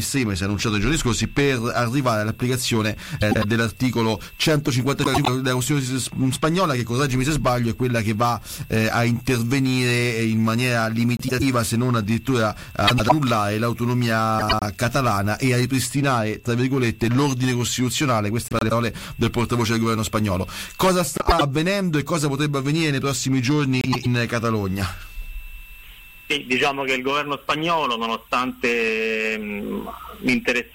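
Frames out of order occur at 3.21–3.44, 5.04–5.28, 11.17–11.42, 12.87–13.12, 14.39–14.63, 18.48–18.72, 21.17–21.41 and 23.81–24.06 s. Each time, two adjacent blocks of about 105 ms reached the decoder swapped, which fits runs of four frames apiece. The roughly quarter-second stretch plays its second half first, so the audio stutters in a garbled flutter while the overall timing stays intact.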